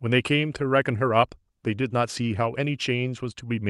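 No technical faults can be heard in this speech recording. It has passed through a WebRTC call path that is working as intended, with the top of the spectrum rolled off at about 12 kHz, which fits an Opus codec at a moderate bitrate.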